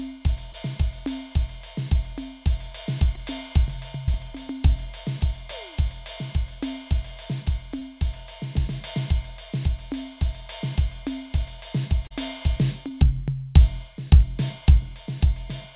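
Music heard over a narrowband call path, with nothing above 4 kHz (consistent with a G.711 mu-law link), shows short concealed packet loss at 0.52, 3.15, 4.06, 7.79, 12.07 and 12.88 s. Each gap is about 20 ms, except 40 ms at 12.07 s. The audio for those moments arrived too late, so the receiver extended the preceding sound and blended back in, leaving a brief smear or wobble. At 12.88 s the patch also adds roughly 10 ms, slightly stretching the timing.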